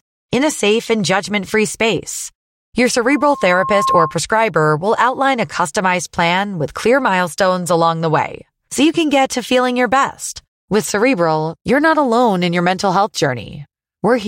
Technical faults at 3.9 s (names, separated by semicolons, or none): loudspeaker feedback squeal